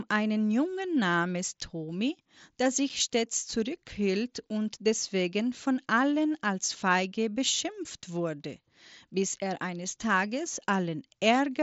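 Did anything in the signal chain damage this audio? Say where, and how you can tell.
Yes, at the Bluetooth headset link: unconcealed Bluetooth headset packet loss at 2.89 s, just before "stets zurückhielt und deswegen", leaves an abrupt 7.5 ms hole, which fits one mSBC packet dropped and never filled in.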